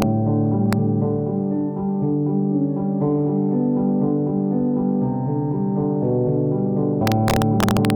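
Integer overflow cracks the sound at 0.02 s and 0.73 s, then repeatedly from 7.07 to 7.90 s. Peaks pushed about 0 to 2 dB past full scale wrapped to the opposite sign instead of being limited, producing violent, sharp cracks far harsher than clipping.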